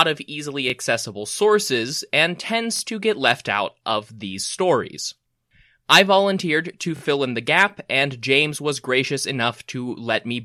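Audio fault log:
0.70 to 7.01 s, repeated buffer, three stutters in this speech clip. Between "of easily" and "accessible sources" a roughly 23 ms slice plays once more; after "sources and" (2.76 to 2.81 s) and after "I volunteered to" (6.97 to 7.01 s) one slice sounds three times. The playback device ran dry and replayed its last block, which fits a 1024-sample buffer, so each join is a hard cut. A waveform shows identical copies butted together; a spectrogram shows a vertical click line at each seam.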